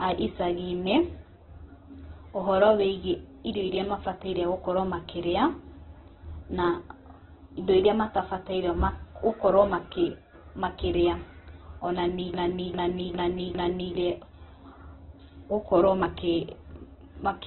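Throughout the speech, heavy Opus compression is the likely cause of the noisy, rough, grainy quality. Nothing reaches above 4.1 kHz, so a spectrogram shows a hard flat ceiling there. The bands below look smeared and noise-filled, which fits a very low rate around 8 kbps.

From 12.34 to 13.95 s a broken-record loop takes over, likely from a stalled stream resending the last fragment it held. A 0.40 s piece repeats four times back to back, and the audio due in that span is lost. The waveform shows identical blocks in sequence.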